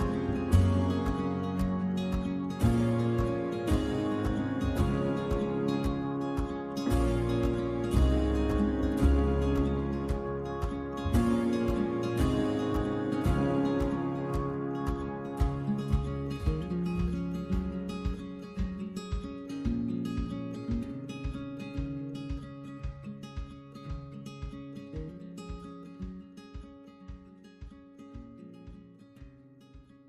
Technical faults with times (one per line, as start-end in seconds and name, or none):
none